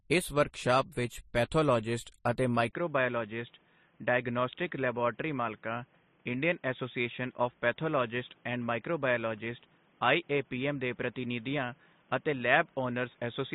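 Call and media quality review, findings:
Transcoding between lossy codecs, whole clip. Speech carries two layers of coding artefacts at once. Nothing above 14.1 kHz. The mixed texture points to an AAC-LC stage at very low bitrate, around 32 kbit/s, then a second MP3 encode near 36 kbit/s. Likely re-encoding in the media path. MP3 pass spends bits on AAC artefacts and adds its own.

Input switched to a poorer device, 2.71 s to end, right after "ਵਰਕਸ਼ਾਪ ਵਿੱਚ ਪੈਥੋਲੋਜਿਸਟ ਅਤੇ". Brief 20 ms dropout at the switch. Speech turns dull and boxy, with nothing above 3.8 kHz. It is also a few dB quieter. A new noise floor sits well below the speech. Likely input routing falling back to a headset call profile or a second microphone.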